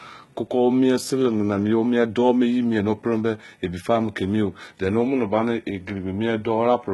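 HE-AAC compression throughout: treble likely rebuilt from copied lower bands, fitting about 16 kbps, so s sounds turn gritty and metallic, with nothing above 11.8 kHz.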